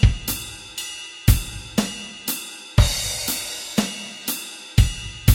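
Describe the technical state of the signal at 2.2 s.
At 2.2 s the signal is intact, with no audible fault at that moment.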